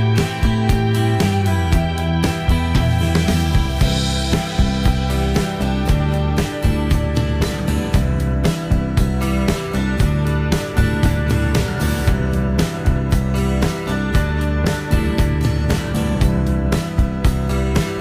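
Nothing technically wrong can be heard anywhere in the audio. With no fault at any point, there are no times or causes to report.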